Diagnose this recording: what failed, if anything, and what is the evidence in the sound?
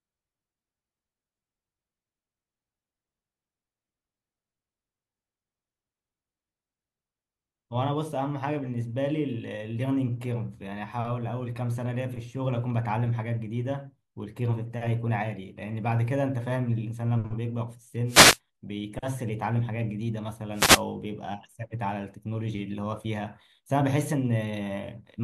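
Wireless microphone noise hits at 18.07–18.39 s and 20.54–20.82 s, in the analogue radio link. Brief static swishes are heard. Reflections cancel the FM signal, letting receiver noise through.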